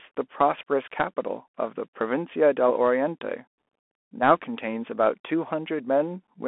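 From start to finish the speech carries a Bluetooth CVSD headset codec signature: a one-bit up-or-down coder with adaptive step size, here band-limited to roughly 250 Hz to 3.4 kHz. It fits a 64 kbps stream. Loud high content outruns the step, leaving scratchy s sounds over granular hiss.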